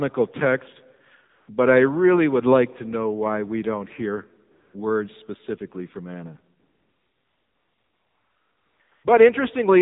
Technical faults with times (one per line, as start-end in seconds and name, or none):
0.00-9.82 AMR narrowband mobile codec
1.30-1.48 AMR comfort noise
4.52-4.74 AMR comfort noise
6.60-9.04 AMR comfort noise